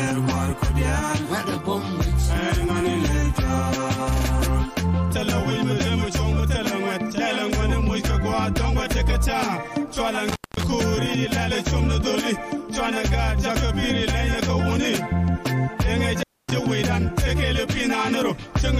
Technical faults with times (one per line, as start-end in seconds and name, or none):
10.29-10.64 intermittent contact
16.20-16.52 intermittent contact